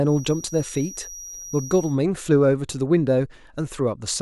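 From the start to 2.0 s, a feedback whistle sits behind the speech. It is a thin, steady tone near 5.8 kHz. It stays well below the speech, roughly 20 dB down. Its level swells and fades slowly but never builds. The likely cause is a loudspeaker-to-microphone loop held just at the edge of feedback. At that point one high frequency keeps ringing without running away. The whistle stops at 2.0 s.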